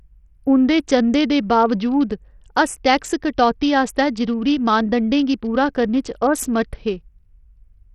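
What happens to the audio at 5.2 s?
At 5.2 s the speech still carries what sounds like Bluetooth SBC compression, present throughout: treble gone above 14.6 kHz, gritty coarse-quantisation noise, likely from a starved bit pool around 64 kbps.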